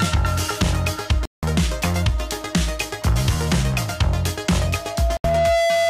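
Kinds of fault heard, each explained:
Bluetooth dropout: The sound cuts to silence twice, from 1.25 to 1.43 s (about 174 ms) and from 5.17 to 5.24 s (about 73 ms). The likely cause is wireless packets arriving too late and being discarded. Sound returns as if it had kept playing.
Loudspeaker feedback squeal: A microphone re-amplifies its own loudspeaker until one frequency runs away. Here a 671 Hz tone appears at 4.65 s. It swells over roughly a second. It ends about 5 dB above the rest of the audio, lasting to the end.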